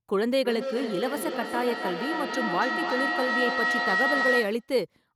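From 0.45 s to 4.75 s there is feedback howl. The sound loops from a loudspeaker back into a microphone, gaining level each trip. It narrows to a tone near 2 kHz, with the loop repeating roughly every 0.3 s, and peaks about as loud as the speech.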